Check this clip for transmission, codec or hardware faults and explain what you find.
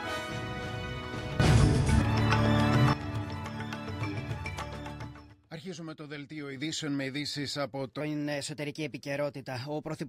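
Three faults are audible: two sudden gain jumps and one section at the wrong speed.

The first sudden gain jump runs from 1.40 to 2.93 s, where the level rises by about 12 dB. The second runs from 5.33 to 6.56 s, where it drops by about 7 dB. Each change lands between one sample and the next, with no ramp. The likely cause is a gain setting applied instantly in the digital path. The sound and the background noise move together, so the whole signal steps up or down at once.

From 8.01 s to the end, the audio plays as a section at the wrong speed. It runs 1.14 times too fast, which raises the pitch by roughly two semitones. Speed and pitch shift together at that moment, so the sound turns higher and more hurried. The likely cause is this stretch being played against the wrong clock.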